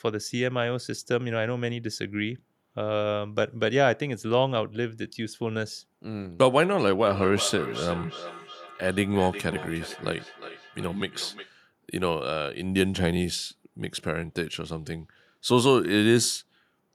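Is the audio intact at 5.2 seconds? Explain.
Yes, the speech at 5.2 seconds plays through intact, with no dropout, click, distortion or other fault heard at that point.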